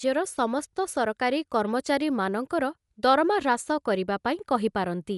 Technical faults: Dolby Digital compression

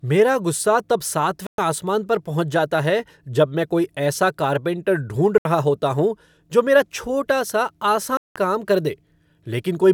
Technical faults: Bluetooth dropout

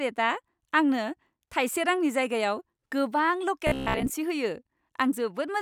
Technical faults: robotic sound from repeated short buffers

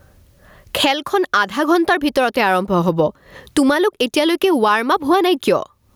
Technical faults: gain pumping

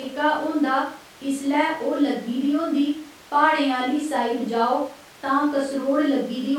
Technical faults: none

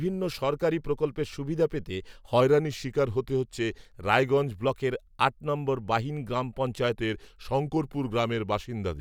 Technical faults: drift correction step

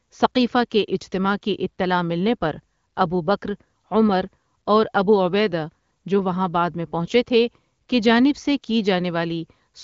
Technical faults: none

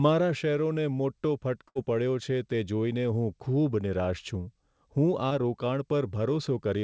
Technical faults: burst of packet loss; short concealed packet loss

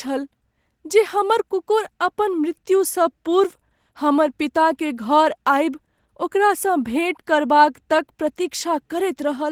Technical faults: Opus voice compression

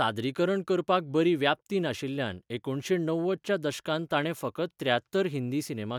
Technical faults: none

